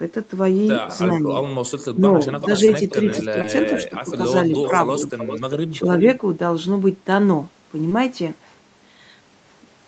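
The far end's echo canceller likely failed to remove what its microphone picked up from a loudspeaker, and that residue was sent back: an echo leak from 2.27 to 4.17 s. A faint delayed copy of the speech trails the original by about 0.4 s (396 ms), sitting about 15 dB below it, so it sounds like a ghost of the speech coming back just after it.

Inside that stretch, audio failed to reach the decoder in time, and the receiver bridged the gaps with short concealed packet loss, at 2.65 to 2.69 s and again at 3.41 to 3.45 s. Each hole is 20 ms of missing audio, which fits a single lost Opus frame, and it was filled by extending the preceding sound before blending back. Each is heard as a brief smear or wobble, and a short consonant may drop out.

The echo leak returns from 4.54 to 5.52 s with the same 396 ms delay but stronger, about 10 dB below the speech, so the repeated copy is more clearly audible.

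From 5.72 to 5.81 s the canceller likely could not separate the near talker from the returning echo while both were active, and it turned the signal down. This speech suppressed in double talk is a short dip of about 5 dB, affecting roughly 50 ms of audio, and it makes the voice briefly duck.

A third short concealed packet loss at 7.89 to 7.93 s again replaces 20 ms with concealment, causing a momentary smear or wobble. All of this sits within an 8 kHz band, which matches the call's normal Opus path.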